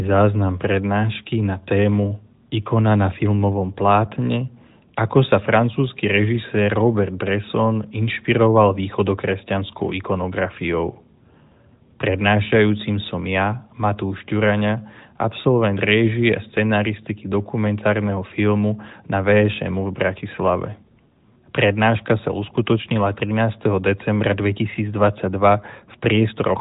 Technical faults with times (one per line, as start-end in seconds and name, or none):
none